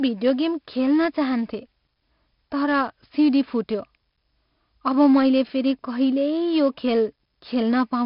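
From start to finish the speech carries heavy 4-bit ADPCM compression damage. Each sample is coded as a coarse 4-bit step from a predicted value, so the quantisation error rides on the signal as a grainy hiss that swells with every loud syllable, and sharp onsets smear where the step size lags behind. Nothing reaches above 5.3 kHz, leaving the sound dull, and the overall coarseness fits a bitrate around 44 kbps.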